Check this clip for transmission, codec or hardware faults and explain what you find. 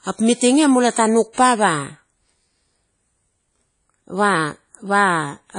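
Two codec faults are audible in the speech.

WMA compression, throughout: the audio is ringing and washy, with nothing above 10.1 kHz, likely from a low-bitrate transform codec near 32 kbps.

Pre-echo, 1.33 to 1.38 s: block-spread quantisation noise fills about 43 ms before a sharp attack, adding a brief hiss and softening its onset.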